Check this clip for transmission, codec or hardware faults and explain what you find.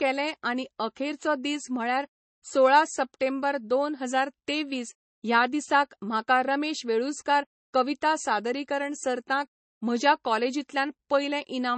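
One fault runs through the whole clip. Throughout, the speech sounds dull and swirly, with nothing above about 8.3 kHz: likely low-bitrate audio saved at a high bitrate, the first MP3 pass's losses surviving re-encoding.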